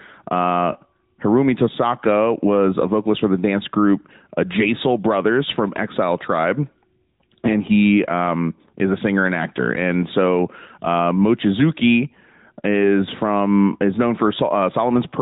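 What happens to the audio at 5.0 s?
At 5.0 s, as throughout, the speech carries AMR narrowband mobile codec damage: nothing passes above 4 kHz, and the vocal-tract model adds a buzzy, synthetic edge that a plain band-limit wouldn't, consistent with a mid-rate mode around 10 kbps.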